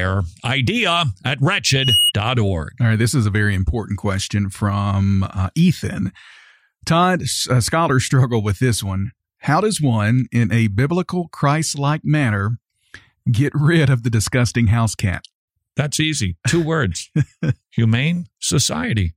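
From 1.73 to 2.12 s a thin, piercing tone at 2.9 kHz swells out of the speech, reaching full strength within about a third of a second and ending up a few decibels louder than the talker. This is loudspeaker feedback squeal: the microphone was picking up the loudspeaker it fed, and at 2.9 kHz the loop gain went above one, so that frequency kept reinforcing itself.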